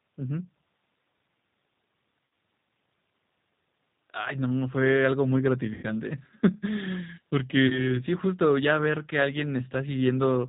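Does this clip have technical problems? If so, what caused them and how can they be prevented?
Yes. The whole clip has a slightly rough, synthetic quality, with nothing above 4 kHz. This is the G.729 codec, and the sound points to its 8 kbit/s mode. At that rate the coder sends only a vocal tract filter, a pitch predictor and a few pulses per 10 ms frame, so the fine detail between pulses is lost. To prevent it, negotiate a wideband or higher-rate codec such as G.722 or Opus when the link allows.

Three brief dropouts are smoothed over by stretched, fading sound: at 2.27 s, from 5.74 to 5.86 s, and from 7.67 to 7.98 s. The sound at these points fits about 60, 90 and 30 ms of missing audio. This is VoIP packet loss concealed by the speech codec. The decoder stretches its last pitch and filter while lowering the gain, and the sound stays weak for a moment after packets return. To prevent it, use a stable, prioritised network path with jitter buffering or forward error correction.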